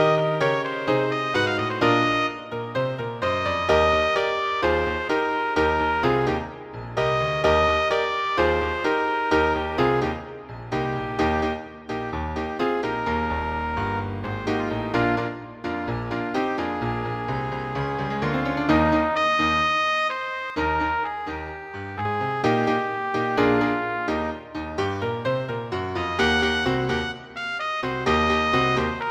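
From 20.5 to 22.05 s, one channel lags roughly 10 ms and sums to mono, a channel delay (comb filtering) that hollows the sound with notches from about 50 Hz.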